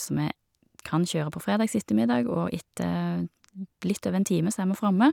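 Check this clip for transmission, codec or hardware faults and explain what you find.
No transmission, codec or hardware faults found.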